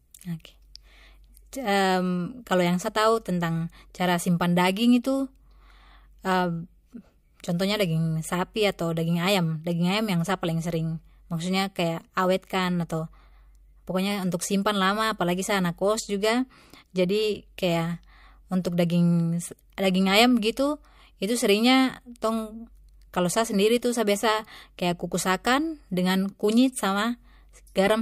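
Right around 1.52 s there's a bit of pre-echo on this speech. A sharp attack lands late in a transform block that looks to be about 26 ms long, and the codec never switches to short blocks, so the quantisation noise meant for the loud onset gets smeared over the quiet stretch just before it. You hear roughly 11 ms of hiss, about 10 dB up, leading into the attack, which comes across soft and blurred.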